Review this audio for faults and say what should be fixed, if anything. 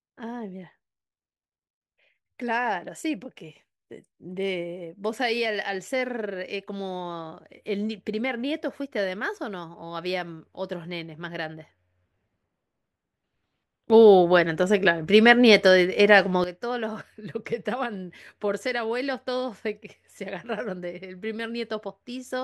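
A sudden gain jump occurs at 13.9 s: the digital gain most likely changed between two adjacent samples, as when a level setting or bit shift is applied with no ramp. The speech and the background noise rise together by about 13 dB in an instant, stay at that raised level, and drop back just as abruptly at 16.44 s. Applying every gain change through a short smoothing ramp of a few milliseconds would prevent this.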